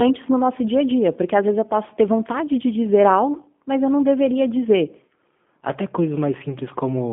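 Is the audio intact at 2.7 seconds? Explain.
No, the G.729 codec affects the whole clip, including 2.7 s: plainly audible rough, synthetic speech, consistent with 8 kbit/s frame-based reconstruction. A spectrogram shows nothing above 3.5 kHz.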